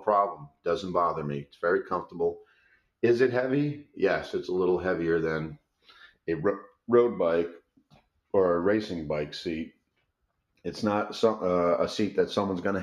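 A noise suppressor built for speech is applied to this music or sound throughout. It treats sustained material as noise, so levels pump by about 5 dB. The same suppressor also cuts sound hard at 0.34–0.66 s, 1.44–1.59 s, 2.39–2.88 s, 5.57–6.17 s and 7.61–8.32 s. Drops reach about 16 to 19 dB, and held parts sink.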